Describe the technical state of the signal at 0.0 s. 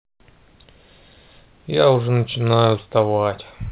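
At 0.0 s the signal is intact, with the speech carried cleanly through the call path and its band-limiting to 4 kHz, as expected from G.711 mu-law telephone coding.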